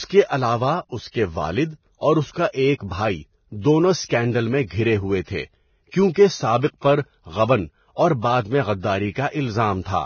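From start to finish, the speech has nothing above 6.6 kHz, and the treble below that edge sounds hissy and grainy, with roughened tones and smeared consonant onsets. This is likely heavy Vorbis compression at a very low bitrate, around 18 kbps. The encoder fits a smooth spectral floor and quantises the residue so coarsely that fine high-frequency detail is replaced by noise of similar energy, while the band edge is pulled down to save bits.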